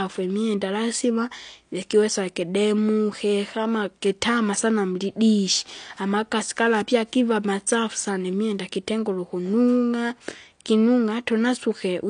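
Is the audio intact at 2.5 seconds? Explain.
No. At 2.5 seconds, as across the whole clip, the speech shows what is likely AAC compression. Nothing survives above 9.8 kHz, and coarse quantisation of each frame's spectrum leaves plainly audible smearing and a fizzy, warbling edge on sibilants, consistent with a bitrate near 32 kbps.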